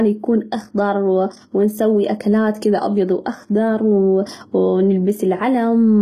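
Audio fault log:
Throughout, HE-AAC compression: the speech has plainly audible codec damage, with the top end sounding not quite real, and s sounds coming out gritty and a bit lispy or metallic. That's the likely cause: the coder keeps only the lower spectrum and fakes the treble by copying lower bands upward under a coarse envelope, so harmonics don't line up. Nothing sits above 14.9 kHz, and the damage fits a low bitrate around 20 kbps.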